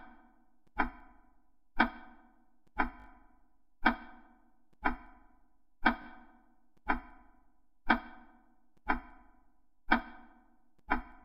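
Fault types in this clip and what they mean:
Repeated buffer: when fresh audio failed to reach the output in time, the device replayed the last block it held, so one short slice sounds several times with a hard edge at each join. Three brief stutters occur: 3.0 to 3.06 s (three extra plays), 6.02 to 6.06 s (two) and 9.76 to 9.78 s (one). Each repeat spans about 20 ms, which fits a 20 ms buffer.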